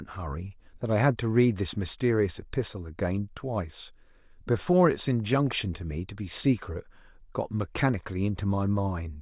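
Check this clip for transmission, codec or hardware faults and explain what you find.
Nothing is wrong with the signal: the speech arrives continuous and stable from beginning to end, with no faults to report.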